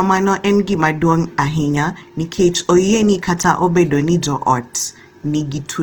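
Throughout, the speech sounds rough and grainy, its tones noisy. This is likely Opus compression in music mode, filling starved bands with noise, which fits roughly 16 kbps.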